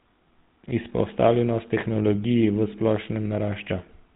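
Throughout the speech, GSM full-rate codec damage is plainly audible: the voice sounds buzzy and gravelly because the vocal-tract model is driven by coarse, regularly spaced pulses, fitting a 13 kbps stream. A spectrogram shows nothing above 3.8 kHz and smeared harmonics.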